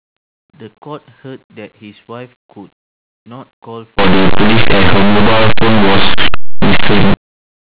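Between 3.99 s and 7.14 s, plain linear 8-bit samples are decoded as if they were mu-law codes: linear audio read as companded. The expander treats each byte as a logarithmic code, so values just to one side of zero come out near the largest outputs while their mirror images on the other side stay small. The waveform's quiet and loud parts are scrambled, and the speech turns into very loud, harsh distortion. Before 3.99 s the speech is read correctly.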